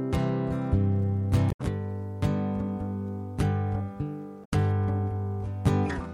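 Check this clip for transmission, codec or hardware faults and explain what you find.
One fault type is present, occurring twice: damaged data in a compressed stream, at 1.48 to 1.60 s and 4.41 to 4.53 s. Corrupted bytes make the decoder misread the frames, lose sync and search for the next frame header, producing a brief chirp or squawk of roughly 0.12 s each time.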